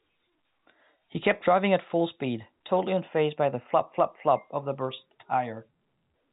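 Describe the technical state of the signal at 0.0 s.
At 0.0 s the signal is intact, carried through G.711 telephone coding that shows nothing above about 3.8 kHz and at most a faint trace of its level-following quantisation noise.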